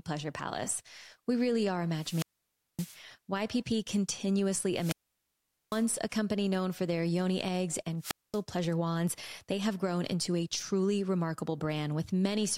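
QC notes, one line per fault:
1.93–3.02 s, 4.73–5.87 s and 7.99–8.41 s, wireless microphone squelch dropout: hiss swells briefly, then the voice cuts to near silence for 0.57 s, 0.80 s and 0.23 s respectively before coming back. The radio link from an analogue FM microphone is fading, so the receiver's noise rises as signal strength falls. Once it drops below the squelch threshold, the receiver mutes its output entirely and unmutes when the signal recovers.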